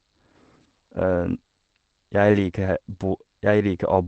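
The clip is speech, and nothing is technically wrong with it.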